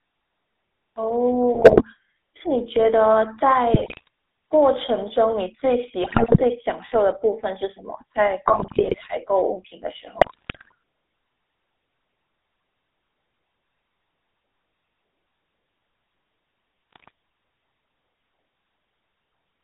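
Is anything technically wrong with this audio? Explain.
Yes. The whole clip runs through the GSM full-rate codec. It modelled the speech with a coarse pulse excitation and kept only the 300 Hz to 3.7 kHz band, which leaves the voice buzzy, gravelly and thin.

Six bursts of GSM bit errors hit the clip, at 1.54 to 1.83 s, 3.74 to 4.08 s, 6.02 to 6.41 s, 8.46 to 8.98 s, 10.18 to 10.73 s and 16.91 to 17.10 s. In each, corrupted filter, pitch or gain values reached the decoder. That warps the spectrum or makes the level jump, and the speech breaks into squawks, pops and gargling.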